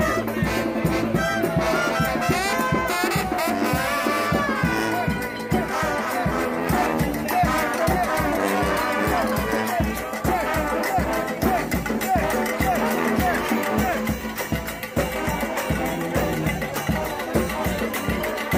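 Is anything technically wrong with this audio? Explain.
No, nothing is technically wrong with this audio.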